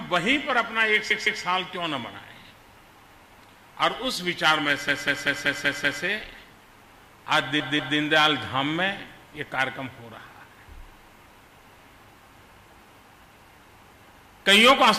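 A stutter at 1.10 to 1.42 s replays a 160 ms block twice more. A longer one at 4.88 to 6.03 s loops a 192 ms block six extra times, and at 7.60 to 7.98 s a 192 ms block repeats twice. These are repeated frames: compressed frames sent again, lengthening the audio.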